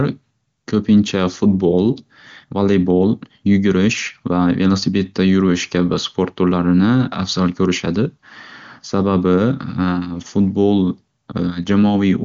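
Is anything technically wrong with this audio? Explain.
No, nothing here is technically wrong. The speech comes through with the clear, wideband character of AMR-WB (HD Voice) at a high rate, most likely its top mode near 23.85 kbit/s.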